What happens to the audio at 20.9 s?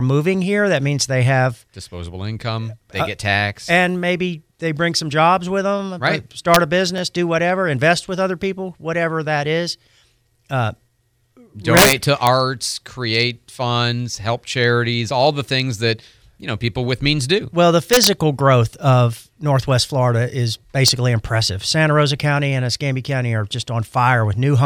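At 20.88 s a brief integer overflow cracks through the speech: a peak pushed about 1 dB past the integer limit wraps to the opposite sign instead of being held flat, so it sounds like a sharp, violent snap, harsher and more abrupt than clipping's flattened distortion.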